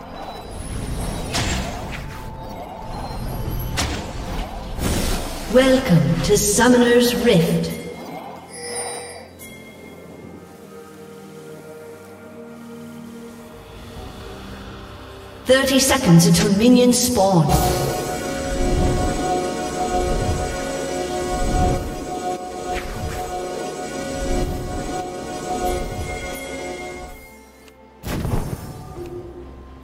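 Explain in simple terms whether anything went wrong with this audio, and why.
Two brief spots of chunks out of order, at 2.3 to 2.36 s and 28.16 to 28.22 s. A 20 ms piece of audio plays two pieces too late, causing a quick jumbled stutter. Unlike a dropout, nothing is missing; it's just shuffled.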